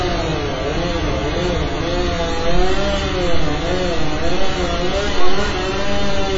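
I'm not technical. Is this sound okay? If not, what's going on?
No. The audio was likely squeezed hard with AAC compression, a space-saving format that throws away detail it judges you won't miss. Here it was pushed so far that everything above about 7.5 kHz is simply gone, and the remaining detail is coarsely rebuilt. From start to finish, about 6 seconds, the sound is dull and muffled, with a smeared, fizzy texture where crisp edges should be.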